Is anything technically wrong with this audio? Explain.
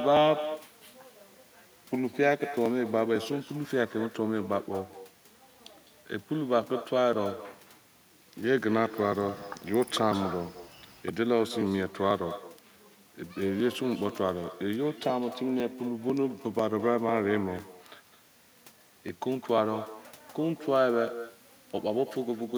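Yes. Throughout, there is echo with no canceller: the far end's loudspeaker feeds its microphone, returning the speech around 200 ms later, about 14 dB quieter and thin.

Periodic USB or driver dropouts run from 0.17 s to 22.08 s, every 0.498 s. A blocked bus or driver skips a couple of milliseconds of audio each time, producing about fifty regular ticks.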